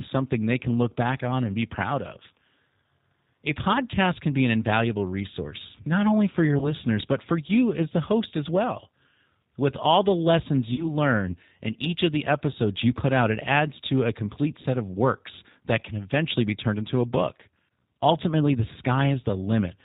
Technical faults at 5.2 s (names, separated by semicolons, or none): G.729 codec